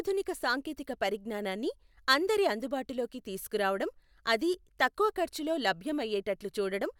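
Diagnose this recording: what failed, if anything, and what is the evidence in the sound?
Nothing failed; no fault is audible in this speech.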